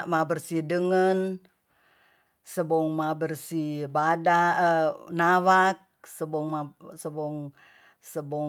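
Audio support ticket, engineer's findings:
No audible faults found on listening; nothing to escalate.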